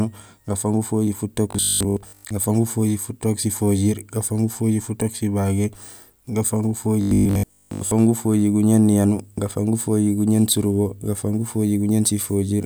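From 1.51 to 2.35 s and 7.01 to 7.93 s, robotic sound from repeated short buffers gives the speech a rigid 50 Hz metallic buzz. It is likely caused by a 20 ms chunk being replayed while most real audio is skipped. The waveform shows identical 20 ms cycles, and the spectrogram shows even 50 Hz harmonic stripes.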